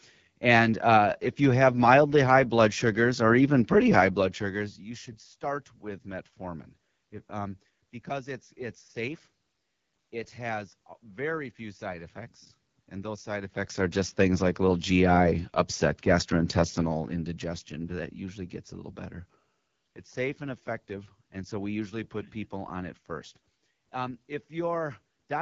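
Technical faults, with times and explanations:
Throughout: AMR wideband (HD Voice) codec damage, plainly audible. The speech sounds rough and raspy, which fits AMR-WB running at one of its lowest rates, around 8.85 kbit/s. Too few bits reach the pulse excitation and vocal tract model, so voiced sounds lose smoothness and gain a buzzy grain. On a spectrogram, harmonics look smeared and blotchy below 6.4 kHz, with a band of diffuse noise filling 6.4 to 7 kHz and nothing above.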